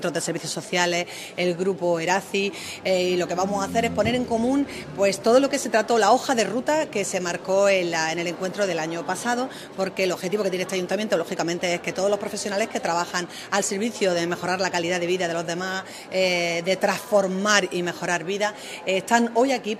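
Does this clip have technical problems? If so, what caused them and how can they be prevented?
No, the signal holds steady throughout, with no technical faults to trace to a cause or guard against.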